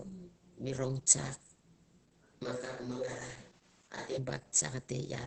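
Opus voice compression runs through the whole clip. The band stops near 8.6 kHz, and the speech sounds muffled, hoarse and slightly robotic. That fits the SILK coder at a low rate, near 10 kbps, coding the excitation coarsely in 20 ms frames.

From 2.45 s to 4.16 s the voice turns suddenly roomy and hollow, with thinner bass. Its level barely changes. Room noise rises to about 30 dB below the speech. This is likely a switch to a distant microphone.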